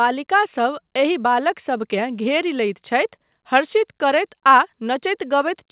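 No technical faults are present in the speech, which arrives over a call path with nothing above 4 kHz, consistent with G.711 mu-law telephone coding at 64 kbps.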